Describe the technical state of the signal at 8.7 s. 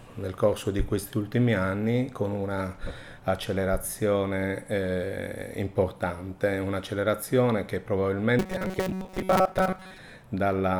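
At 8.7 s there is robotic sound from repeated short buffers (8.39–9.99 s): most of the audio is a rigid 188 Hz buzz, likely from a roughly 5.3 ms buffer being looped. Its fixed pitch sets it apart from flanging.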